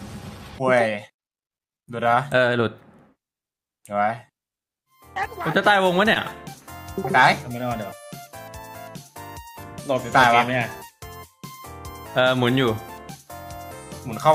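A short concealed packet loss occurs at 6.13 to 6.17 s: about 20 ms of audio never reached the decoder, so the receiver synthesised a 20 ms fill by extending the preceding sound and blending back, leaving a brief smear or wobble.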